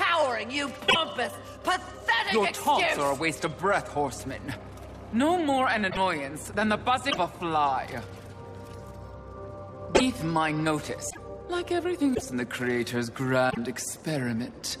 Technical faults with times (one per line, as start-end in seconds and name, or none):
0.88-0.96 broken MP3 bit reservoir
5.89-5.98 broken MP3 bit reservoir
7.09-7.18 broken MP3 bit reservoir
9.94-10.01 broken MP3 bit reservoir
11.09-11.18 broken MP3 bit reservoir
12.14-12.22 broken MP3 bit reservoir
13.49-13.58 broken MP3 bit reservoir